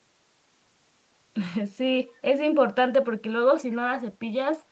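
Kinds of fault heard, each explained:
Echo leak: a faint, brief copy of the speech, roughly 35 dB below it, surfaces around 3.71 to 3.75 s, trailing the original by about 208 ms. The fixed lag marks it as a delayed duplicate, likely residue an echo canceller failed to remove, unlike reverberation's smooth continuous decay.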